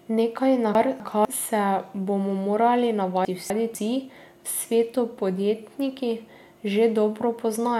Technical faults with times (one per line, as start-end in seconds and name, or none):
0.75-1.25 chunks out of order
3.25-3.75 chunks out of order